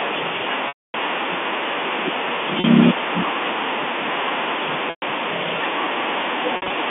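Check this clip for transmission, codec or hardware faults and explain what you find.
Four dropouts of packet loss with pitch repetition interrupt the speech, carried over a G.711 A-law telephone line whose 250 Hz to 3.5 kHz band comes through cleanly. The gaps fall at 0.68 to 0.94 s, 2.60 to 2.64 s, 4.90 to 5.02 s, and 6.56 to 6.70 s. The 40 ms gap sounds like a briefly held, buzzy note. The 260 ms and 120 ms gaps trail off into silence before the speech cross-fades back. The last gap is broken up, because about 100 ms was lost in pieces over 140 ms, with the longest run at 60 ms. In each case the receiver filled the hole by repeating the final pitch period and fading it out over roughly 50 ms. The gap lengths fit 20 ms packets.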